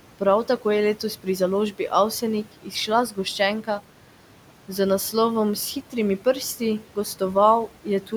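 Throughout the speech, the background noise drops away in the pauses and swells back up beneath each phrase. These are noise suppressor artifacts: the suppressor treats the steady room noise, which sits about 19 dB below the speech, as noise and cuts it by about 12 dB whenever no speech is present.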